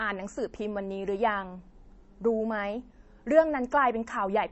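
From start to finish the speech sounds dull and watery, with nothing above 8 kHz and a swirly, warbling texture that is plainly audible, especially on s sounds and sharp consonant onsets. This is likely MP3 compression at a low bitrate, around 32 kbps. Short of bits, the encoder cuts the treble at a fixed point and drops quieter frequency detail. That detail then flickers in and out between frames, and attacks blur.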